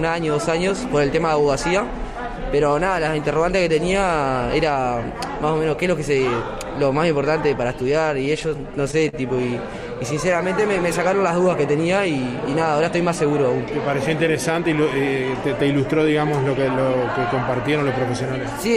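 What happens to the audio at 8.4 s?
Repeated stalls (stutter) run from 8.25 to 9.15 s: late packets drained the jitter buffer six times, and each gap, up to 42 ms, was filled by extending the preceding sound. Unlike dropouts, nothing goes missing. The audio just drags and hitches.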